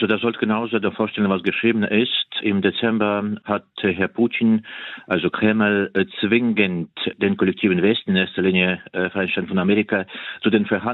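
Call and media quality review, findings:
Nothing stood out on listening; no findings to raise for this clip.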